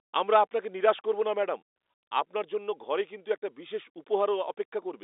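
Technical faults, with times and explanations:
No technical faults heard.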